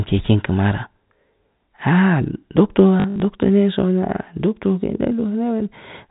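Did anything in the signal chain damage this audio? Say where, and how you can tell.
Yes, at the network stage: packet loss with the last packet repeated, between 3.0 and 3.2 s. About 120 ms of audio is missing, scattered over that 200 ms, with the longest gap 60 ms. The receiver replayed the last good packet to fill each gap, so the speech stutters robotically. The repeats seldom line up with the pitch, and they buzz near 50 Hz, which fits 20 ms packets. On a waveform, identical short segments repeat back to back with small steps at the joins. On a spectrogram, the speech stays within the 4 kHz telephone band of the G.711 coding.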